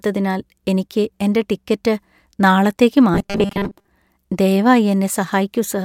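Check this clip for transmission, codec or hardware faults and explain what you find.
There's one fault here, a stretch of robotic sound from repeated short buffers running from about 3.14 to 3.88 s. The speech collapses into a stiff, metallic buzz pitched at 200 Hz that still loosely tracks the talking. The likely cause is fresh audio arriving too slowly, so the playback side keeps looping a tiny chunk, which fits a repeat of about 5 ms. Most of the real audio through that span is skipped rather than played.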